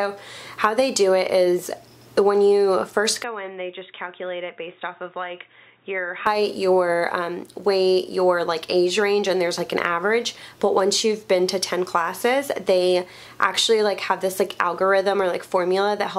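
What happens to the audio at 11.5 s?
Nothing goes wrong at 11.5 s; the audio plays through that moment intact, with no dropout, click or distortion.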